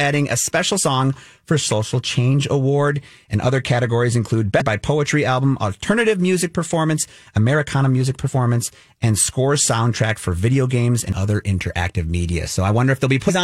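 Brief glitches cut into the speech at 0.77 s, just after "a special"; at 4.60 s, after "other categories include"; from 8.27 to 8.29 s; at 11.12 s; and from 13.28 to 13.31 s. Each is damaged data in a compressed stream. The decoder misreads the corrupted frames, loses sync and hunts for the next valid frame header.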